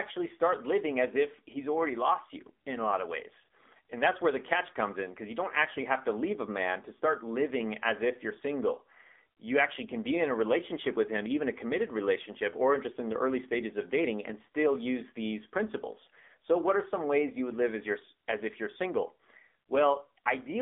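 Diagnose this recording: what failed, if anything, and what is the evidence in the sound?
Codec stage, throughout: AMR narrowband mobile codec. Nothing above 3.7 kHz, and a buzzy synthetic texture, unlike plain band-limiting, fits a 7.4 kbps mode.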